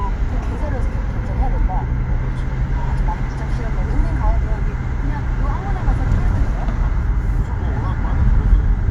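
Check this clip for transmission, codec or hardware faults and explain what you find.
No transmission, codec or hardware faults found; the audio runs without any audible defect.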